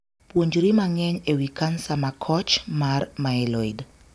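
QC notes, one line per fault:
No faults heard anywhere in the speech.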